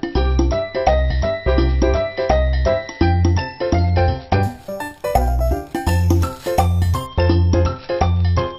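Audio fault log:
4.43 to 7.07 s, imaging from sample-and-hold upsampling. A bright, metallic fizz sits on top of the sound. The rate was raised from 12 kHz to 48 kHz by repeating each sample, with no smoothing filter. Mirrored copies of the spectrum form around every multiple of 12 kHz. The lowest fills 6 to 12 kHz, about 23 dB below the sound. It tracks the level and moves opposite to the pitch.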